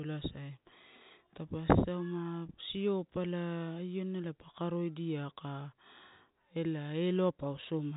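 No technical faults can be heard in this speech.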